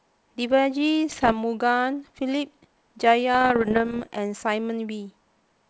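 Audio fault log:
1.09 to 1.33 s: bit errors on an ADPCM link. Pops and rough bursts with brief level jumps. Roughly one bit in a hundred flips, upsetting the decoder's step size and predictor.
3.35 to 4.08 s: bit errors on an ADPCM link. A longer run of clicks and rasping bursts. The error rate is a little lower, but each error still rings on for milliseconds.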